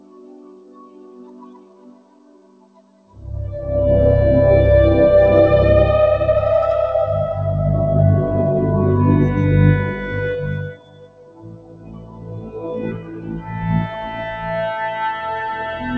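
From the first moment to the end, a noise suppressor built for speech is acting on music or other sounds. It treats sustained tones, room ambience and reverb as noise, so level swings by around 20 dB as attacks pass and held material sinks, giving a pumping, fluttering, thinned character. On a waveform the envelope breathes in and out independently of the playing. A spectrogram shows sustained partials and decays fading in patches while transients stay intact. The band stops at 8 kHz, which points to a wideband call codec such as G.722 at 64 kbps.

The first sound cut by the noise suppressor runs from 0.0 to 3.2 s. Steady content there drops by as much as about 14 dB, so the opening sounds hollow and sunken while onsets still poke through. The waveform shows a shrunken body between sharp peaks. On the spectrogram the sustained energy looks faded.

The same cut returns from 10.68 to 13.64 s, again reaching about 14 dB. 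Tails are shortened and held sounds sag.

From 13.86 to 14.49 s a milder cut of about 6 dB follows. Here decays dim rather than disappearing.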